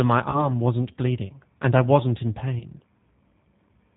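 The whole clip runs through the G.729 codec at 8 kbit/s, so everything above 4 kHz is gone and the speech has that rough, slightly synthetic edge. At 0.30 s, VoIP packet loss concealed by the speech codec: about 40 ms went missing, and the decoder stretches a buzzy tone or coloured noise that fades until about 0.50 s, just before "wasn't bleeding and I". Right after "and I wasn't in", a shorter 20 ms gap at 2.59 s gets the same treatment, with the smear lingering to about 2.65 s.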